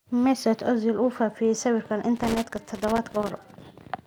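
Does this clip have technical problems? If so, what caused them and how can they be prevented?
Yes. From 2.16 to 3.65 s the speech carries loose connector crackle: a worn or dirty contact intermittently breaks the signal, chopping it. On a waveform this shows as jagged dropouts and spikes; a spectrogram shows scattered broadband vertical streaks. Cleaning contacts and replacing worn cables or jacks prevents it.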